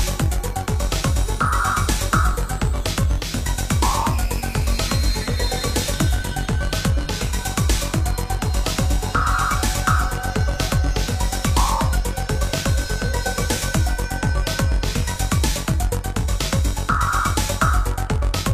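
No technical fault can be heard anywhere in the audio. There is nothing to mark with a time or trace to a cause.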